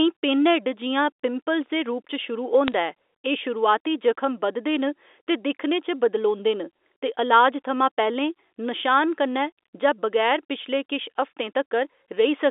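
From 2.68 to 2.74 s, a brief burst of bit errors on a digital phone line puts sharp ticks and a short crackle over the speech, which stays intelligible. On this G.711 mu-law telephone line, a flipped bit corrupts a single 8-bit sample. Flipping the sign or a high-order bit throws that sample far from its neighbours, with roughly two bits in a thousand affected. The waveform shows isolated needle-like spikes. The spectrogram shows thin vertical lines reaching across the whole 300 Hz to 3.6 kHz telephone band.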